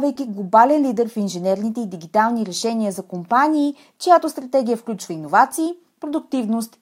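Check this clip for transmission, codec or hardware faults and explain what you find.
Nothing to flag here: the speech holds together nice and steady all the way, with nothing audible worth pointing at.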